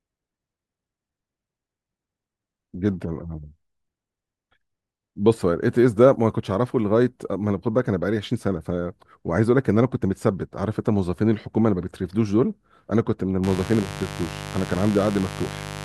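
At 13.44 s a mains buzz comes in and runs to the end of the speech at 15.85 s, sitting roughly 10 dB below the talker. Sharp spikes from switching electronics or a poorly shielded line pulse twice per 50 Hz cycle, so the sound is a steady, raspy 100 Hz-rooted buzz. A spectrogram shows evenly spaced horizontal lines at multiples of 50 Hz climbing into several kHz, and the waveform carries a fine repeating spike train beneath the speech.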